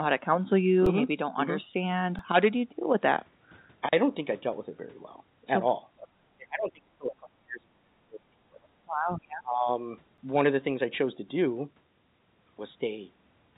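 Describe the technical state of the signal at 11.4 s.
At 11.4 s the speech is intact, with no dropout, glitch or distortion, and the only thing to hear is the narrowband call-path sound, with nothing above 4 kHz, which fits a G.711 A-law codec at 64 kbps.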